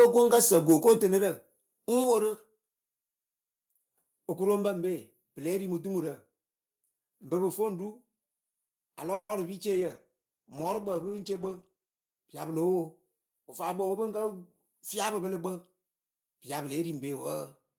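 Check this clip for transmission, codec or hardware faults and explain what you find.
Six kinds of fault turn up, spread across the speech.

From 0.00 to 0.93 s there is microphone overload. The loudest peaks sound flattened and crackly, about 5 dB past full scale. The likely cause is an input gain set too high, so the converter sliced off the waveform tops.

Microphone volume stepped down three times: at 1.02 s by about 6 dB, at 2.04 s by about 4 dB, and at 4.68 s by about 2 dB. Speech and background drop together each time. The likely cause is the call software cutting the input gain after that clipping.

A call audio freeze runs from 9.13 to 9.32 s. The sound stalls and trails off as a fading buzz, with about 70 ms of near silence. It likely comes from late packets starving the jitter buffer. Around 160 ms was filled in, and nothing was lost.

A call bitrate drop follows, from 9.73 to 12.30 s. 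The encoder fell from 32 kbps to 13 kbps. The speech turns coarse and watery and loses its top end. It stays that way until the rate climbs back.

At 12.53 s the microphone volume stepped up by about 2 dB. The speech and the background jump together. The software raised the input gain in a single step, having judged the signal too quiet.

A jitter buffer speed-up runs from 13.39 to 15.22 s. The playback runs at about 109% speed with unchanged pitch, so the speech sounds hurried. The receiver trimmed short pitch-period slices, about 150 ms in total, to shrink its backlog.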